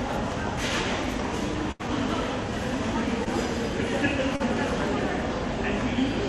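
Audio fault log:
1.71–1.81 s, burst of packet loss: about 80 ms of audio arrived too late or not at all. The receiver stretched the last sound across the hole while fading it down, so it turns into a held buzz or dying hiss, then playback resumes further on with that stretch gone.
3.24–3.28 s and 4.36–4.42 s, short concealed packet loss: gaps of about 20 ms and 40 ms never reached the decoder in time. Each was patched by extending the preceding sound, from its pitch or as shaped noise, then blended back into the real audio, leaving a brief smear or wobble.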